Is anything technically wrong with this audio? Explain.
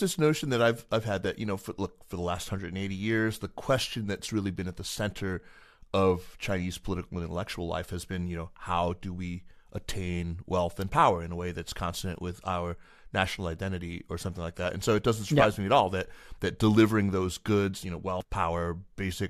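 Yes. From 18.21 to 18.23 s, near the end of the speech, there is damaged data in the compressed stream. The decoder misreads or rejects the corrupted frames, loses sync and hunts for the next valid frame header, producing a brief chirp or blip.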